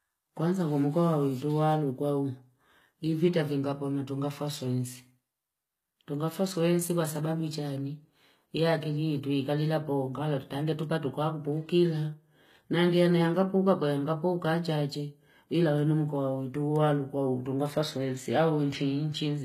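The speech here has been through a low-bitrate encoder, most likely HE-AAC at around 20 kbps, which codes only the lower band properly and fills in the treble by spectral band replication, copying lower bands upward under a coarse envelope. Across the whole clip the top end sounds bright but synthetic, with harmonics that fail to line up above the crossover, so s sounds come out gritty, lispy and metallic, and the damage is plainly audible.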